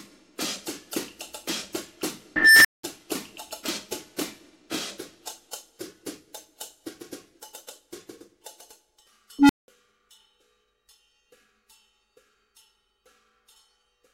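At 2.36 s and 9.39 s an unstable filter's feedback grows without bound. A tone around 2 kHz, then around 300 Hz, swells over 0.29 s and 0.11 s into clipping: a bright spectrogram line, flat-topped waveform, then 0.19 s of blank silence.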